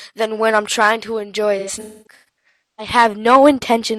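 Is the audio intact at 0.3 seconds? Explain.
Yes, the speech at 0.3 seconds is intact, with no dropout, click, distortion or other fault at that moment.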